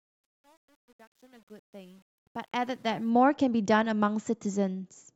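Truncation distortion on a fade affects this speech clip from 0.0 to 3.10 s, worst before 2.35 s. The fade-in stage drops low bits without dither, which fits roughly 9-bit resolution, so the quiet start turns gritty as the fade rises to full level by 3.1 s.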